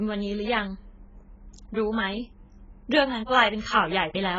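Speech running the full clip with heavy AAC compression damage: everything is dull and smeared, sibilants fizz and warble, and nothing exists above 7.6 kHz. A spectrogram shows a hard ceiling there, likely from AAC-LC at a very low bitrate, around 12 kbps.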